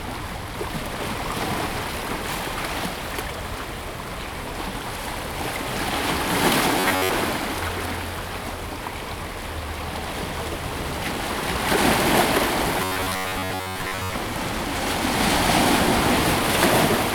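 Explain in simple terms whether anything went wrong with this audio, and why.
Two stretches turn harsh and mechanical, from 6.80 to 7.10 s and from 12.78 to 14.14 s. This is robotic sound from repeated short buffers, likely from playback looping an 11 ms slice. That imposes a steady 94 Hz buzz while most real sound is skipped.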